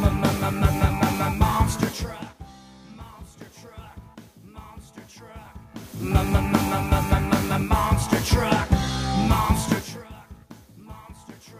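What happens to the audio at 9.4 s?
Nothing goes wrong at 9.4 s: the audio runs on intact there, with no sudden change in level and no break or artefact at that point.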